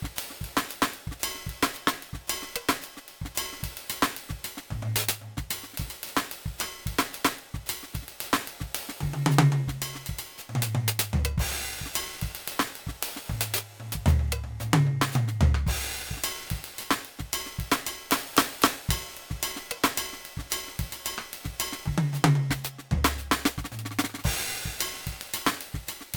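Throughout the music, the converter's clock is shaken by interference at around 2 kHz: periodic clock jitter. Each component of the sound gains sidebands that far above and below it, strongest on high-pitched material, giving a rough, metallic edge that disappears whenever the music falls silent.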